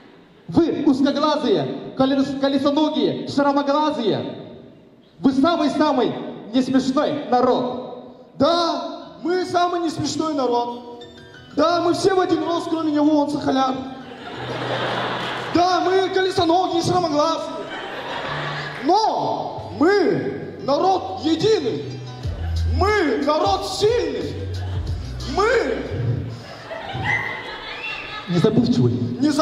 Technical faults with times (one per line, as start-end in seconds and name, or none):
none